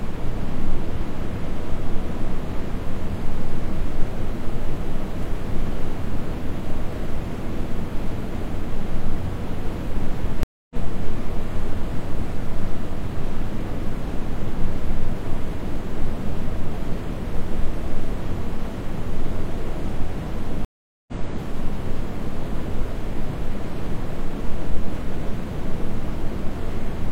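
Stream reconnects at 10.43–10.76 s and 20.65–21.13 s: the connection dropped, leaving 0.27 s and 0.43 s of silence, then a fresh decoder resumed roughly a fifth and half a second later.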